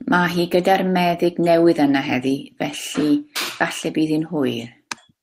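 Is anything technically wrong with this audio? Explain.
No, nothing is technically wrong with this speech recording. No fault can be heard anywhere in it.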